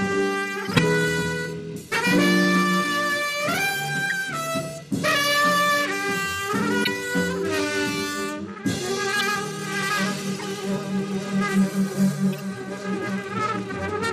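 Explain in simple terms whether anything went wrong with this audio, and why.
Short chirps and noise bursts occur at 0.65–0.79, 1.88–1.96, 4.05–4.12, 6.82–6.88, 9.17–9.22 and 10.34–10.45 s. Each is a corrupt frame decoded: damaged compressed data was played anyway, putting sound at wrong frequencies for a few brief frames.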